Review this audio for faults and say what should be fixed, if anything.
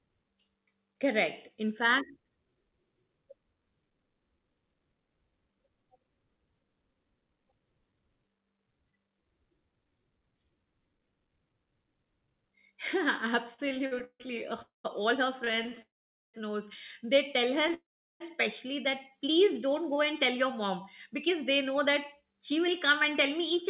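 Repeated stalls (stutter) run from 13.54 to 15.78 s. Packets kept arriving late, so the jitter buffer ran dry seventeen times and the receiver stretched the last sound each time, filling about 396 ms, with the longest hold 155 ms. On a spectrogram, the speech harmonics smear into short flat bands again and again. On a waveform, short stretches repeat.

Call audio freezes occur at 14.62 to 14.86 s, 15.82 to 16.36 s and 17.74 to 18.22 s, lasting 0.24, 0.54 and 0.48 s. The last sound turns to a fading buzz, then silence of about 140, 450 and 370 ms. The cause is likely packets held up in transit, emptying the buffer. A spectrogram shows a smeared band decaying into blank columns, and the waveform flattens. Nothing is lost, but playback is pushed later.

A jitter buffer slow-down follows at 19.11 to 19.55 s. To rebuild its reserve, the receiver repeated single pitch periods, adding 41 ms and playing at 92% speed with the pitch unchanged. 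On a spectrogram, the harmonic spacing stays the same while the syllables stretch. The waveform shows near-identical periods back to back.

A jitter buffer speed-up runs from 20.64 s to 23.63 s. With surplus audio queued, the receiver trimmed pitch periods, removing about a tenth of a second and playing at 103% at normal pitch. The spectrogram shows slightly compressed syllables, and the waveform shows periods missing at the seams.

This all travelled over a G.711 A-law call path, whose coding noise and empty band above 4 kHz are expected for that codec. To prevent these faults, fix the network delay variation upstream and give the jitter buffer a steadier, larger target so it stops draining and refilling.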